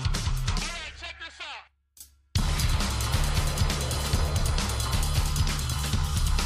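Compressed frames skipped at 2.58 s: the audio jumps forward, losing about 20 ms of sound in a single brief break. At that point one or more whole frames of the compressed stream never reached the output, either because they were missing from the file or because the decoder rejected them as damaged. Playback resumes at the next frame it accepts, so the sound on either side is joined with the missing stretch simply dropped.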